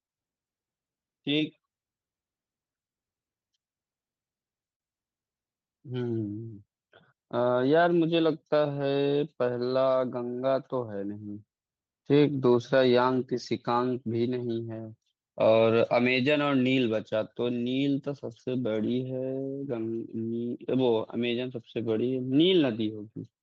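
At 7.81, 8.75–8.81, 13.11–13.17, 17.65–17.67, 18.79–18.93 and 21.87–21.89 s, lost packets were rebuilt from error correction. Each briefly turns rougher and noisier, with no gap. The Opus call path caps the audio near 8 kHz.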